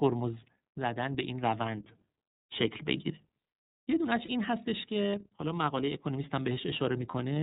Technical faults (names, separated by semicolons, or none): iLBC codec; lost iLBC frames